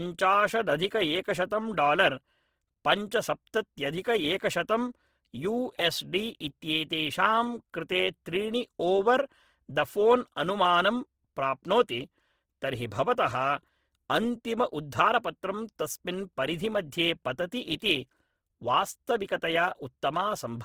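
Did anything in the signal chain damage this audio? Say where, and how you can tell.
Yes, at the codec stage, and it runs the whole way through. The speech has a rough, grainy texture: tones turn to noise instead of clean detail, though the top end stays open almost to 20.4 kHz, so nothing sounds muffled. That points to Opus compression, likely in its CELT music mode at a very low rate, something around 16 kbps. It keeps each band's energy but refills starved bands with folded or noise content.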